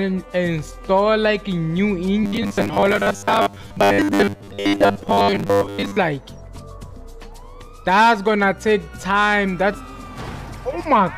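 From 2.24 to 5.97 s, the playback likely ran short of new data and kept repeating roughly 10 ms buffers, skipping most of the real audio. The result is robotic sound from repeated short buffers: a rigid, metallic buzz fixed at 100 Hz.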